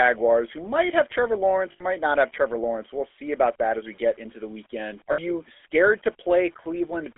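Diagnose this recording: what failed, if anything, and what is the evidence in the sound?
GSM full-rate codec, heard throughout: a codec-stage fault. The whole recording has a buzzy, gravelly roughness and sits in a 300 Hz to 3.5 kHz band. It fits 13 kbps full-rate coding, which models the vocal tract and drives it with sparse, regularly spaced excitation pulses.

Lost GSM frames at 1.72 to 1.83 s, just before "not have", and at 5.12 to 5.19 s, just before "scared to": a network-stage fault. The sound freezes into a rough, metallic ring for about 80 ms and 60 ms. This points to four and three bad frames, each filled by repeating the last good frame.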